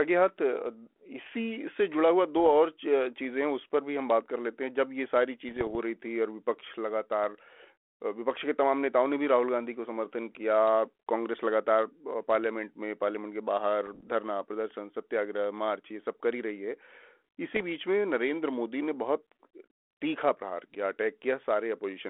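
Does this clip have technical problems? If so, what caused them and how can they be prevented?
Yes. The clip suffers bit errors on an ADPCM link, at 2.36–2.51 s, 5.49–5.75 s, 13.87–14.09 s and 17.53–17.63 s. The narrow telephone band and light coding texture point to a 32 kbit/s G.726-type link. A small share of its bits were flipped, heavier in the last two bursts. Each wrong bit also corrupts the decoder's adaptive step size and predictor, so the error carries on briefly. In the speech this is heard as pops, rough gritty bursts and short jumps in level. Prevention: improve the radio link's signal margin and add error detection with concealment, so corrupted frames are muted or replaced instead of decoded.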